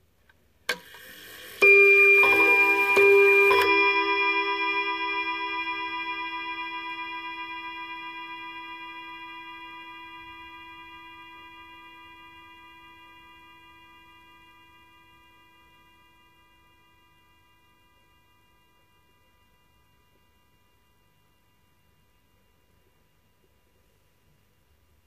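No technical faults are audible.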